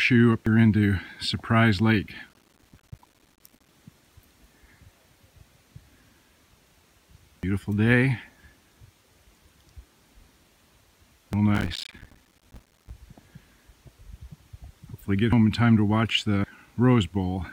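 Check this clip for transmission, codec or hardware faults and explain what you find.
Two kinds of fault are present: five skips in the sound, and two bursts of gritty crackle.

Dropped buffer (overrun), at 0.46, 7.43, 11.33, 15.33 and 16.44 s: hardware likely overwrote samples before collection, so the sound jumps ahead, losing about a tenth of a second, and about two tenths at 16.44 s.

Processor overload crackle, from 2.29 to 3.69 s and 11.55 to 12.90 s: an overloaded processor misses many short buffers of about 5 ms, each leaving a hard-edged silent gap and producing a tearing crackle.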